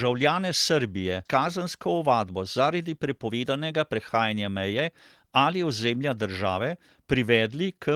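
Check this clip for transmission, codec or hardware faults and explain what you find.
Two transmission faults are audible in this speech.

Skip ahead, at about 1.25 s: a stretch of speech, roughly a second long, never reached playback. It was lost in transit or discarded by an overflowing jitter buffer while newer packets were already queued. Nothing fills the gap, so the speech on either side is butted almost directly together. The listener hears an abrupt jump forward, with the talker suddenly further along than the previous sound would predict.

Jitter buffer speed-up, from 1.57 s to 7.18 s: after the jump, the buffer was holding more audio than its target, as happens when delayed packets arrive in a burst. To shrink that excess, the receiver kept cutting out tiny pieces one or a few pitch periods long, trimming around half a second in total. The speech runs at about 109% of normal speed with its pitch unchanged, so it sounds rushed for most of the remaining clip.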